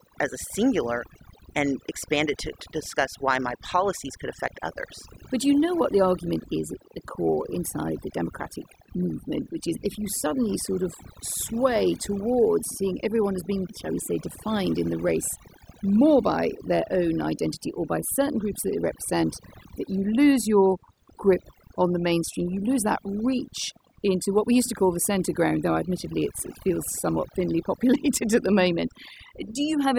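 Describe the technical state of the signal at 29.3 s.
At 29.3 s you're hearing overdone noise removal, and it runs through the whole clip. The denoiser is set so aggressively that any frequency band sitting near its noise estimate gets pushed way down, so the background drops and breaks up into little twinkling specks, and quiet parts of the speech get pulled down along with it.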